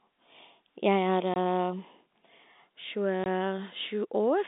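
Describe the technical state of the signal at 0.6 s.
At 0.6 s the speech is intact, with no dropout, click or other fault, only the narrow telephone band of about 200 Hz to 3.7 kHz that comes with G.711 A-law coding at 64 kbps.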